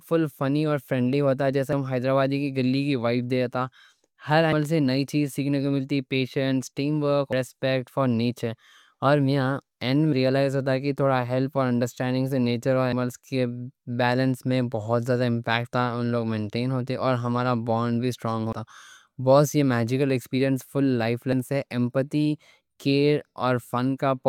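Speech skips abruptly at 1.73, 4.53, 7.33, 12.93, 18.53 and 21.33 s, each losing roughly a fifth of a second with no silence, likely audio missing between 3 s chunks.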